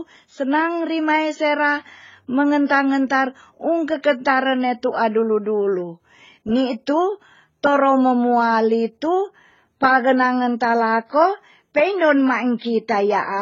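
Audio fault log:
Throughout: transcoding between lossy codecs. The speech has nothing above about 7.3 kHz and carries two layers of smeared, warbly artefacts. This is likely an AAC-LC encode near 16 kbit/s re-encoded as HE-AAC. The later codec keeps the earlier damage and adds its own.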